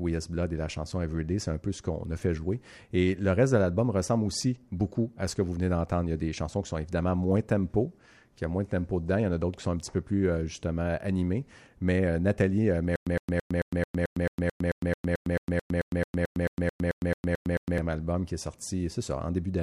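From 12.96 to 17.78 s there's a stutter with silent gaps: a 111 ms speech fragment repeats every 220 ms with dead silence between, likely a stalled stream retrying.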